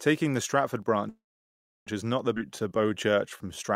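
This is a short speech clip with a cluster of transport problems. From 0.82 to 0.88 s the level suddenly dips by about 6 dB and then recovers, which sounds like one channel drops out for that brief moment before the two sides get summed to mono. At 1.09 s the audio freezes into a fading tail and then roughly 0.68 s of silence, resuming at 1.89 s right where it left off. That's a call audio freeze, likely caused by packets stalling and the jitter buffer running dry. Nothing is lost, but about 0.77 s of extra delay gets inserted. Around 2.35 to 2.38 s there's a skip ahead: roughly a third of a second of speech vanishes and the two sides are stitched together with only a 15 ms bridge, so some of the delay built up earlier gets clawed back. Right after, from 2.39 s to the end, a jitter buffer slow-down kicks in. Pitch periods and pause fragments get repeated to rebuild the buffer's reserve, so the speech plays at about 85% speed with the same pitch, stretching things by 211 ms and sounding a bit drawn out.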